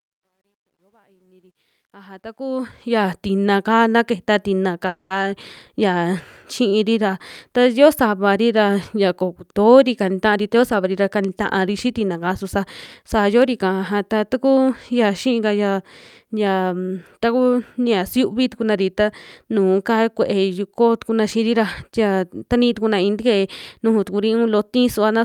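From 0 to 3.16 s the speech fades in, and the fade carries truncation distortion. The gain stage keeps only about 12 bits and adds no dither. At low level the waveform collapses into a few coarse steps. The result is gritty. It is worst from 0 to 1.66 s.

At 4.87 to 5.12 s there is a call audio freeze. The last sound is stretched into a fading tail lasting about 230 ms. It ends with roughly 10 ms of silence. Then the speech resumes exactly where it stopped. Nothing is lost. The flow is simply held up, which pushes everything after it about 230 ms later. Delayed packets that left the jitter buffer empty are the likely cause.

From 10.31 to 12.57 s comes a jitter buffer speed-up. The speech plays at about 110% of normal pace while the pitch stays the same. The receiver had too much audio queued. It trimmed it by cutting many tiny slices, each one or a few pitch periods long. Together they remove around a fifth of a second. 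The passage sounds hurried.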